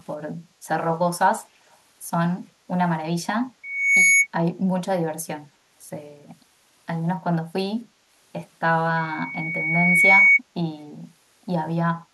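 From 1.70 to 1.77 s, an echo canceller likely let some far-end loudspeaker pickup through, an echo leak: a very faint copy of the speech returns about 256 ms late. From 3.63 to 4.27 s, a microphone re-amplifies its own loudspeaker, causing loudspeaker feedback squeal: a 2.2 kHz tone swells over roughly 0.4 s, ending around 10 dB above the speech.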